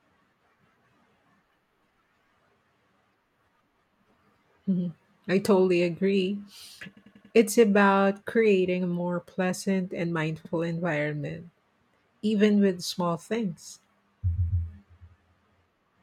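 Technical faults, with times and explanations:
6.96–7.33 s, 10.45–10.52 s and 14.36–14.64 s, repeated frames: the speech stutters as a 92.9 ms slice replays four more times, then a 69.7 ms slice once more, then a 139.3 ms slice twice more. Runs of compressed frames were decoded again, lengthening the audio by about 0.72 s.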